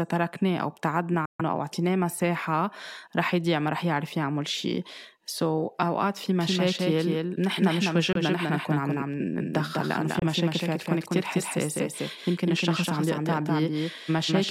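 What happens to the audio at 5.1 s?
Nothing goes wrong at 5.1 s: the speech there plays through intact, with no dropout, click, distortion or other audible fault at that moment.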